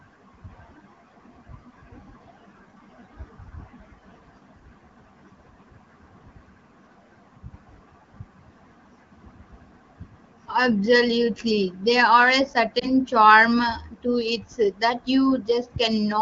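Lost AMR speech frames at 12.79 to 12.88 s, just after "are a": one corrupted frame failed its check, so the HD Voice decoder, whose light coding suggests roughly 15.85 kbit/s, patched the gap with repeated pitch and vocal tract settings at reduced gain, giving a brief dip or warble.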